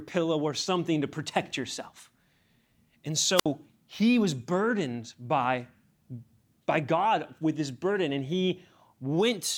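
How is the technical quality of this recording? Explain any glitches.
The recording has one glitch: a wireless microphone squelch dropout at 3.36 to 3.46 s. The FM radio link fades, the receiver's squelch closes and mutes the output for about 60 ms, so a brief burst of hiss precedes a near-silent gap before the speech returns.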